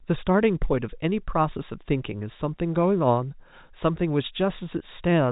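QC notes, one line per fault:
No faults are present: the speech sits in the G.711 A-law telephone band, with nothing above 3.8 kHz, as that coding path allows.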